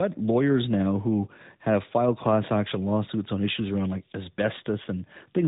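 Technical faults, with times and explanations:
Throughout, tandem speech coding. The speech passed through two speech coders in a row, which fits an ADPCM stage followed by AMR-NB. The second coder re-encodes the first one's errors. This makes the speech rough, muffled and warbly, with nothing above 3.8 kHz.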